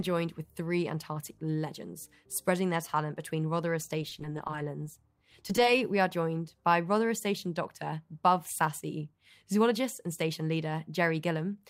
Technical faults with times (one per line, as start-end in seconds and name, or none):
4.02-4.96 repeated packet loss (robotic sound)
5.32-5.64 repeated packet loss (robotic sound)